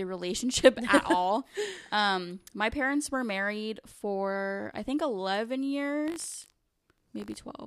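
A robotic rattle at about 50 Hz cuts into the speech from 6.04 to 7.38 s, riding on the sound and dropping away wherever the signal does. This is buffer tearing. The program filling the ring buffer and the hardware draining it have drifted out of step, so they cross in every 20 ms period. A thin sliver of each period, only a percent or two, replays audio from roughly 70 ms earlier, with hard joins either side that repeat as the buzz.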